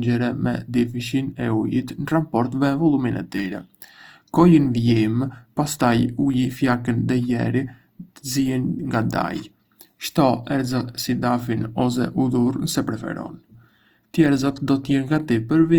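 From start to end the speech carries Opus compression damage: rough, grainy texture on voiced sounds, likely from Opus in its music mode at a low rate near 24 kb/s. A spectrogram shows noisy, smeared bands with few holes, reaching up to 20.1 kHz.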